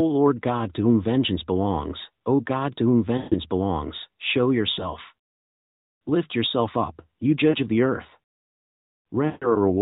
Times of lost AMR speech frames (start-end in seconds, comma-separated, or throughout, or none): 3.18-3.35, 4.72-4.91, 7.50-7.58, 9.26-9.53